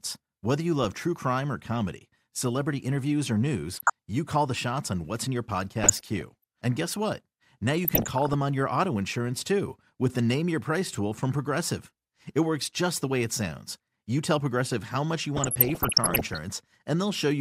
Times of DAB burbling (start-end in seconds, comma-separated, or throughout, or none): 3.73-3.90, 5.84-6.44, 7.83-8.34, 15.37-16.38